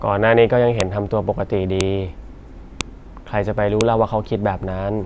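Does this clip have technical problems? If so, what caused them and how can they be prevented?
Yes. Sharp, loud clicks cut through the speech at 0.80, 1.81, 2.81 and 3.81 seconds, evenly spaced one second apart and indifferent to what the voice is doing. This is a file header played as audio: the clip was assembled from one-second WAV pieces, and each piece's few dozen header bytes were read as sample values, producing a brief snap at every join. To prevent it, strip headers from all but the first piece before concatenating or streaming.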